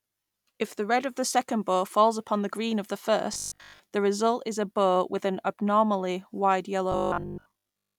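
Speech clip with robotic sound from repeated short buffers at 3.34 to 3.80 s and 6.92 to 7.98 s. A rigid 50 Hz metallic buzz, most likely from a 20 ms chunk replayed over skipped audio, showing as evenly spaced harmonic lines and a visibly repeating waveform.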